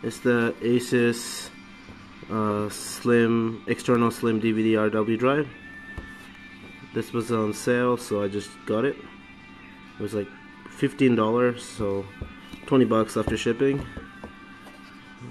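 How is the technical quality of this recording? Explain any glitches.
There's one glitch: a loud pop from 3.95 to 3.97 s. It's a single sharp pop a few dB above the sound, which carries on underneath. It's likely a sudden voltage step from a plug, switch, static or driver glitch, shaped by the circuitry after it.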